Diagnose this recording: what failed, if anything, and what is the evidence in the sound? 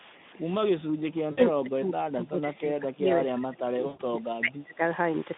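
Call processing stage: from 0.68 s to 4.81 s the speech level sinks repeatedly, by about 20 dB at its deepest, across roughly four seconds in total. The high end thins and stretches of speech break up into fragments. This pattern is likely speech suppressed in double talk: with both ends active, the echo canceller could not separate the near talker from the loudspeaker echo, so it attenuated the whole signal rather than risk letting echo through.

Network stage, with VoIP packet loss concealed by the speech codec at 1.31–1.39 s (60 ms) and 3.87–4.02 s (120 ms). In both gaps the speech is stretched into a buzzy tone or coloured noise that fades out. The longer gap fades further. The decoder filled each gap by replaying its last pitch and spectral envelope at falling gain. The channel's band of about 150 Hz to 3.6 kHz and its light coding roughness fit Speex at about 15 kbps.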